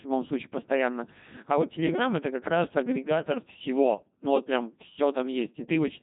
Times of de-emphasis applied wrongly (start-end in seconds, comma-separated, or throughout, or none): none